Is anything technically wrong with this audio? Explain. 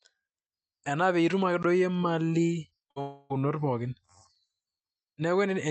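Yes. The audio has several faults, all around packet delivery and output timing.

Blocks of digital silence occur at 1.63 s and 4.35 s. The first lasts about 16 ms. The second lasts about 5 ms, which fits a 256-sample buffer. In each, the output was briefly filled with zeros, probably because the buffer was not filled in time. The signal drops straight to nothing and returns with no fade. The first is heard as a short hole and the second as a tick.

Short concealed packet loss occurs at 2.69–2.73 s and 2.79–2.83 s. Each time, about 20 ms of audio never reached the decoder. The receiver covered the gap by extending the preceding sound, then blended back into real audio. These are heard as brief smears or wobbles in the speech.

A burst of packet loss follows at 2.91–2.98 s. About 60 ms of audio went missing in a row. The receiver filled about 50 ms by carrying the last sound forward and turning it down. 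The result is a short held buzz or fading hiss. The speech then resumes slightly further on, with the material in between gone.

A long network dropout runs from 3.01 to 3.40 s. About 0.3 s of audio never arrived. The gap is almost entirely filled with a continuation of the last sound that fades as it goes. It never reaches true silence. The likely cause is a network stall rather than a local fault. When the audio returns, the missing stretch is simply absent.

All of this sits on an Opus call path. Its bandwidth cuts off near 8 kHz, and the coding noise fits a bitrate around 40 kbps.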